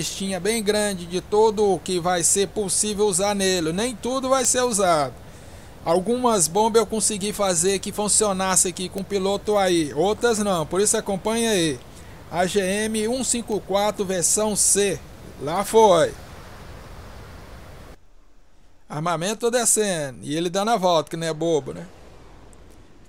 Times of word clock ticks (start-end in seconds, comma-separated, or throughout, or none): 1.43-22.60